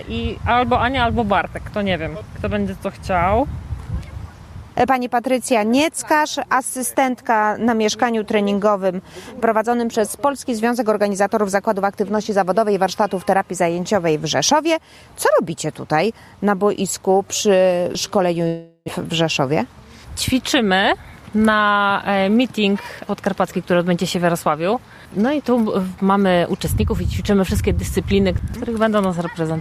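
At 18.47 s the sound stops flowing and the last moment is stretched into a buzzy tail that fades over about 0.4 s, followed by roughly 30 ms of silence before audio resumes at 18.90 s with about 0.4 s of material gone. This is likely a long network dropout, with the receiver concealing lost packets. A spectrogram shows smeared, repeating bands decaying into a brief blank gap; the waveform shrinks, flatlines, then restarts abruptly.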